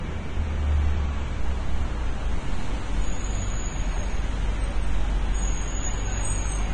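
From start to finish the audio sounds hissy and grainy: the top end stops dead at about 9.7 kHz, what treble remains is a rough, noisy wash rather than clear detail, tonal parts have a coarse edge, and sharp onsets arrive smeared. This is likely heavy Vorbis compression at a low bitrate, probably near 24 kbps. The codec discarded everything above the cut-off and quantised the upper residue so coarsely that fine detail was replaced by noise of similar energy.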